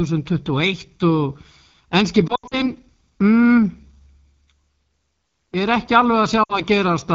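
Throughout the speech, the AMR wideband (HD Voice) codec is working at a low rate, with a rough, raspy texture that fits 8.85 kbit/s, one of the two lowest modes. The pulse-driven vocal tract model cannot keep up at this rate, so voiced sounds turn gritty. The hiss-like sheen above 6.4 kHz is shaped noise, not real detail. Unlike a narrowband phone codec, the band still reaches about 7 kHz, so the sound is coarse rather than muffled.

From 2.28 to 2.65 s, lost AMR speech frames break up the audio over about 240 ms. Roughly 140 ms is missing, with the longest continuous gap around 80 ms. Radio errors corrupted these frames, so the decoder repeated the last good pitch and vocal tract settings at falling gain. That produces warbling dips that drop to near silence within two frames, and the voice returns briefly weak and rough.

A shorter burst of lost AMR speech frames at 6.43 to 6.63 s removes about 60 ms, heard as a quick warble and dip.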